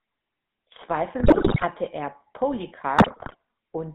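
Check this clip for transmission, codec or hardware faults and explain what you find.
Two faults are audible: GSM full-rate codec coloration across the whole clip, and two bursts of GSM bit errors.

GSM full-rate codec, throughout. The speech has the buzzy, gravelly roughness of the early GSM coder, which fits its 13 kbps rate. The coder rebuilds the voice from a vocal-tract filter driven by sparse, evenly spaced pulses, so fine detail in the excitation is lost and voicing turns grainy. On a spectrogram the energy sits between roughly 150 Hz and 3.6 kHz, with nothing above that band. Harmonics look smeared and noisy rather than cleanly striated.

GSM bit errors, from 1.2 to 1.66 s and from 2.98 to 3.36 s. Corrupted bits reached the decoder, so some frames were rebuilt with wrong filter, pitch or gain values. Each stretch breaks into squawks, pops and gargling. The first burst sounds harsher, which fits an error rate of several percent. 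On the waveform, frame-sized blocks jump abruptly in level, with sudden spikes or dropouts. On the spectrogram these frames show smeared, misplaced formant energy and vertical blotches.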